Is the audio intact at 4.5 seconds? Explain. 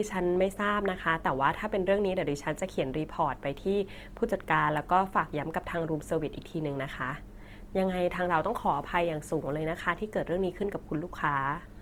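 No. At 4.5 s the speech carries Opus compression that runs through the whole clip. It is likely a music-mode encoder whose band-filling turns the sound grainy and rough, pointing to roughly 24 kbps. Unlike MP3 swirl, the spectrum stays full up to about 20.2 kHz with few holes.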